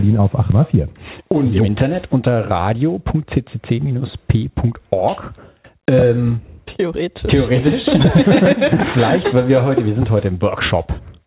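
At 0.52 s there's a skip ahead. Later audio was already queued when a chunk, roughly 0.7 s of it, was dropped, and the two sides were joined almost directly. So the sound lurches forward with barely any gap, and whatever sat in that stretch is just gone. Over 0.52 to 0.63 s you hear the seam, and the delay drops by roughly the same 0.7 s.

From 1.18 s to 3.86 s the jitter buffer speed-up kicks in. The buffer was holding more than it wanted, so the receiver kept snipping out tiny pitch-period-sized pieces, roughly 0.3 s in total. Playback runs at about 111% with the pitch unchanged, which gives that hurried, pushed-along feel. Throughout, the band stops at 4 kHz, which fits a narrowband call codec like G.711 mu-law.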